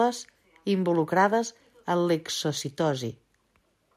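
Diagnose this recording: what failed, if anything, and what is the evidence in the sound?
Nothing failed here: listening through the speech, no point in the recording gives any sign of trouble at any stage of the chain.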